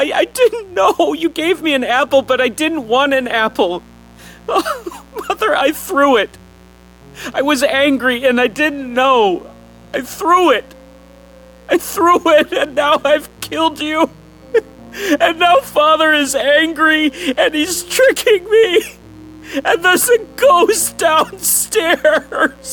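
Mains buzz runs through the whole clip, built on 60 Hz harmonics that extend up to several kilohertz. Sharp switching spikes leaked in twice per mains cycle, so the result is a steady, raspy buzz sitting roughly 30 dB below the wanted signal.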